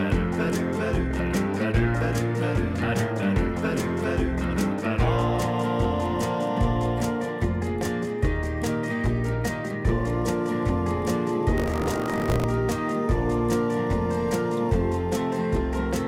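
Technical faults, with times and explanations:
11.56–12.45 s, buffer tearing: a rattling 50 Hz buzz. A small slice of each 20 ms period replays audio from roughly 40 ms earlier, with hard joins.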